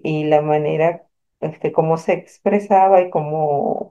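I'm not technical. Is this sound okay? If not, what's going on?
Yes, the recording sounds fine; nothing here is wrong.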